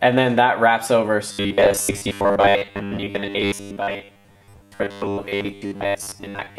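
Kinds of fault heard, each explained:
Robotic sound from repeated short buffers: from 1.32 s to the end, the audio becomes a rigid, metallic buzz at 100 Hz that follows the original only loosely. The likely cause is new audio arriving too seldom, so playback fills each gap by replaying the most recent 10 ms fragment while the real material is skipped. Around 70 percent of that stretch is repeated material, and looping every 10 ms produces the steady 100 Hz buzz.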